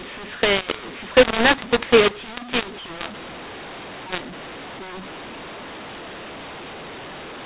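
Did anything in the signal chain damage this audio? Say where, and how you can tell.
Yes. At the codec stage, A-law telephone audio was decoded as mu-law, a mix-up of the two G.711 laws lasting the whole clip. The wrong curve scrambles sample levels and lifts the quietest well above silence, so the speech turns harsh and distorted and pauses fill with noise.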